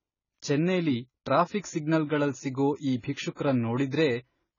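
A speech recording with heavy codec damage throughout, likely AAC compression at a very low bitrate, consistent with about 16 kbps AAC-LC. Nothing is present above 7 kHz, so the sound is dull and band-limited, and the coarse quantisation of the spectrum gives sibilants and sustained sounds a smeared, warbling, fizzy texture. There is also a pre-echo from 3.35 to 3.37 s: a short hiss about 23 ms long leads into a sharp attack. This happens because the codec spread its quantisation noise across the whole transform block, including the quiet stretch before the onset, which also softens and blurs the attack itself.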